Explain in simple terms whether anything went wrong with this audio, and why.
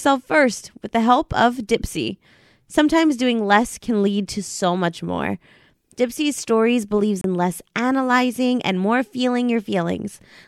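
Something did go wrong, briefly: from 7.21 to 7.24 s the speech drops out to a tiny gap of silence, about 28 ms, then carries on. That's likely a Bluetooth stall, where radio interference delayed the audio packets and the headphones ran out of sound to play for a moment.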